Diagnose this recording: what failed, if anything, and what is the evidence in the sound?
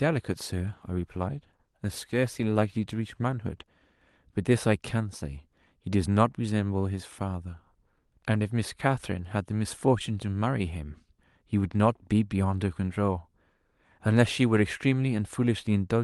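From 0.32 s to 4.31 s the speech turns rough and watery, then clears. This is a call bitrate drop in call processing: a falling bandwidth estimate pushed the Opus encoder from 32 kbps to 17 kbps, bottoming out for 3.18 s.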